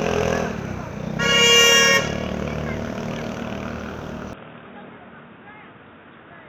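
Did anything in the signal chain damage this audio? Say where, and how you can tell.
Yes. From 4.33 s to the end, the audio abruptly loses everything above 3.8 kHz, drops roughly 5 dB and gains a new noise floor some 30 dB down, with no gap. This likely reflects an input switched to a poorer device at the driver stage.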